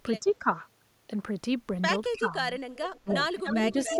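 Speech suppressed in double talk at 0.2–0.48 s, 2.12–2.33 s and 3.42–4.0 s dips this speech by about 10 to 15 dB, likely because an echo canceller couldn't separate local talk from loudspeaker echo. Echo leak at 0.27–0.33 s, 2.95–3.14 s, 3.44–3.58 s and 3.84–3.96 s adds a delayed copy, 305 ms behind at first and 288 ms later. It climbs from about 30 dB to about 5 dB below the speech, likely because loudspeaker pickup escaped cancellation.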